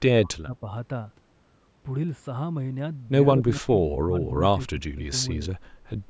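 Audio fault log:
throughout: channel delay (comb filtering). One channel of the speech runs a few samples behind the other, roughly 0.07 ms, and summing to mono cancels their shared content at evenly spaced frequencies. The first notch sits near 7 kHz, leaving the top end thin and phasey against a band that stops at 8 kHz.
0.00–0.65 s, 3.36–4.40 s, 4.72–5.12 s: speech suppressed in double talk. The speech dips sharply in level in patches, by about 30 dB at the start, about 20 dB in the middle span and about 15 dB near the end. This is likely an echo canceller pulling down the near talker while the far side spoke.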